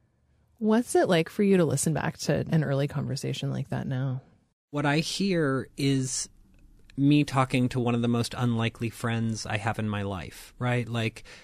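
At 2.49 s, between "to listen back to" and "an early conversation like", compressed frames are skipped. Around seven 46.4 ms frames, some 300 ms of audio, never play. The sound jumps ahead rather than leaving the silent gap of a dropout.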